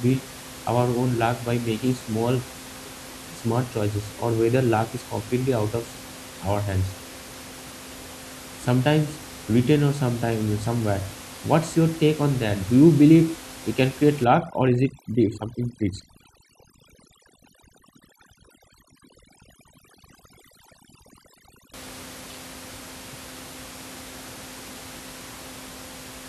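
From 14.24 to 21.74 s, after "believe we can create", overdone noise removal strips bands near the room-noise floor, leaving twinkling specks and taking quiet parts of the speech with them, unlike codec swirl across all levels.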